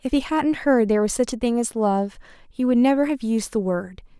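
A short speech recording with no technical faults to report. Nothing in the signal chain calls for comment at any point.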